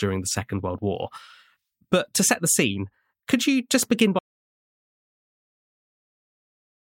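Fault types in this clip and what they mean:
Audio dropout to silence: the input was likely lost to a disconnect, failed link or mute while the recorder kept writing silence. Right after "could you just begin" the speech cuts off at 4.19 s, and complete silence with no room tone runs to the end.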